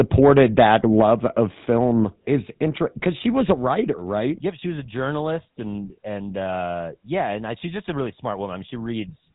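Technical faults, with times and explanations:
Throughout, GSM full-rate codec: the speech has a buzzy, gravelly roughness that is plainly audible, and nothing comes through above about 3.8 kHz, so sibilants and brightness are gone. The coder approximates the vocal tract with a simple filter and drives it with a coarse train of regularly spaced pulses, keeping only every third excitation sample. That sparse excitation produces the grainy buzz, and the character fits the 13 kbps full-rate coder.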